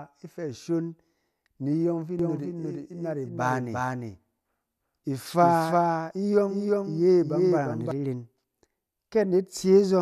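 Just after "ni iyɔng fi", at 2.19 s, a doubled audio track begins and runs to 7.91 s. A second copy of the speech sits roughly 400 ms behind the first and about 5 dB quieter. It has the same full bandwidth and no reverb or room tone, so it sounds like a hard, clean echo. The copy cuts in and out abruptly. It was likely captured twice by a slower path, or left out of step in an edit.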